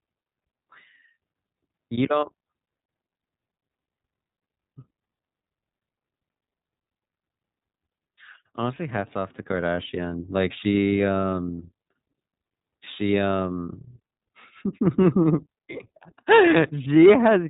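The whole speech clip passes through the iLBC codec. Nothing above about 3.8 kHz survives, so it sounds muffled and narrow. Each frame's excitation is coded on its own, which fits 30 ms frames at roughly 13.3 kbps. The coding damage is plainly audible as a rough, synthetic edge.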